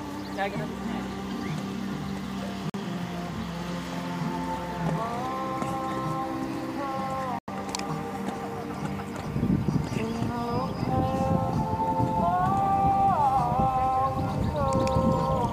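At 2.70 s the sound drops out abruptly for about 60 ms, and at 7.39 s it happens again, this time for about 112 ms. Both are a corrupt frame muted: bits in the compressed stream got flipped, the decoder rejected the damaged frames, and the player filled the gap with silence. The holes fit a couple of frames the first time and roughly four the second, and timing carries on unshifted afterwards.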